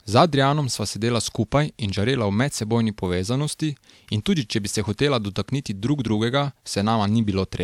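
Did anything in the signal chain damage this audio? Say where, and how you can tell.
No, nothing in this speech recording stood out as damaged by any stage of the signal chain when I listened.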